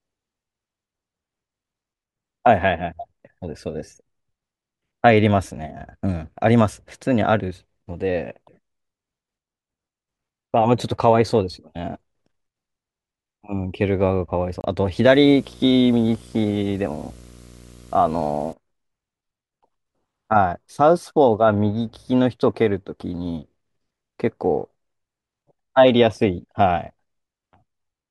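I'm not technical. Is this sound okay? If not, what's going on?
No. At 14.61 s there is a block of digital silence: for 30 ms the speech cuts out and back instantly, leaving a brief hole. From 15.07 to 18.53 s there is video or display buzz, a 60 Hz buzz with a hiss-like hash on top, caused by a screen or video cable leaking into the audio.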